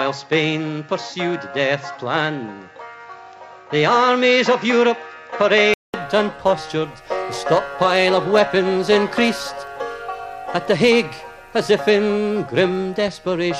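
From 0 to 5.94 s the sound is dull, with nothing above 7.6 kHz (a flat spectrogram ceiling) and a faint floor of noise. A 200 ms gap in the waveform then opens into full bandwidth at a similar level, likely an input switched to a poorer device.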